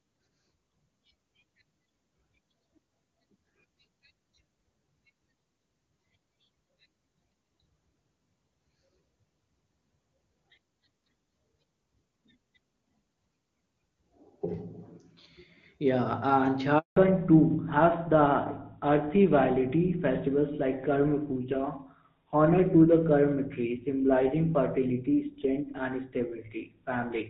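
At 16.78 s a handover gap cuts the speech for about 180 ms, until 16.96 s. The call switched networks and no frames arrived, so the sound dies within a few tens of milliseconds. The waveform shows a flat silent stretch, and the spectrogram shows a blank vertical band.

From 16.96 s to the end, a fallback to narrowband takes hold. Before the gap, the HD Voice wideband codec is clean, consistent with its highest rate near 23.85 kbit/s. Afterwards the link drops to an older narrowband codec, most like GSM full rate, and nothing above 4 kHz survives. The speech turns duller and rougher. On a spectrogram the upper energy ends abruptly at a hard ceiling.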